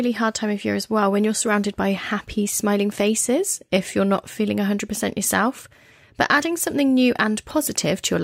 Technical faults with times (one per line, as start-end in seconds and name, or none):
none